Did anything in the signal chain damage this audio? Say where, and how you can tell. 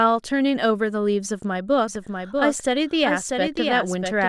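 Yes. From 1.88 s to the end, a doubled audio track appears: a full-band second copy of the speech, around 5 dB quieter, trailing by roughly 0.7 s and starting abruptly. That is likely a slower duplicate capture path in the driver or buffer stage. Unlike room echo, it never decays or picks up reverberant colour.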